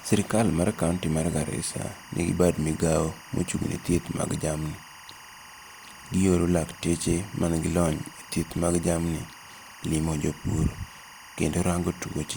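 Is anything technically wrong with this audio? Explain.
Yes. Timecode bleed runs throughout the speech. Linear timecode at 24 frames per second leaks in, switching near 1 and 2 kHz. It adds a steady chirping warble, roughly 20 dB below the voice.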